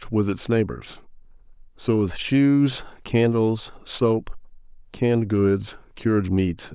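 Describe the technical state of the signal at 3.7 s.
At 3.7 s the speech signal is intact, with no audible fault at that moment.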